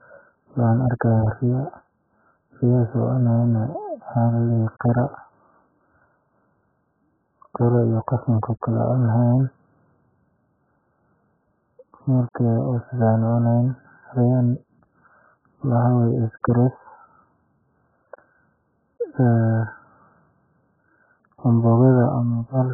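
Throughout the speech, the sound is muffled and dull, with nothing above 1.7 kHz, and it carries a heavy warbling, smeared texture where the spectrum has been thinned into holes and patches. The likely cause is AAC compression with the AAC-LC codec: starved of bits, the encoder has pulled its cut-off down and coarsely quantised what remained. Damage this severe fits a very low bitrate, around 8 kbps.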